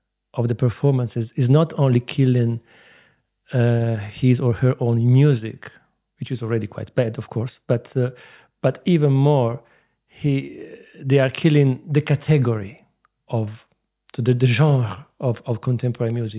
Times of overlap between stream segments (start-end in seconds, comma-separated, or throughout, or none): none